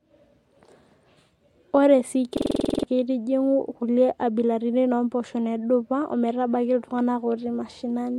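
At 2.37–2.83 s a machine-gun stutter repeats one 46 ms fragment ten times: a system hang loop, hardware replaying its buffer while the driver froze.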